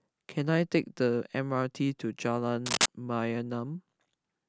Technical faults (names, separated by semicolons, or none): cable scratch noise